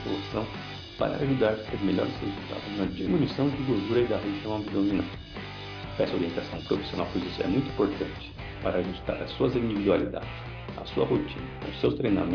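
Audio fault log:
No faults can be heard anywhere in the clip: the signal stays continuous and steady, with nothing that departs from its expected technical state.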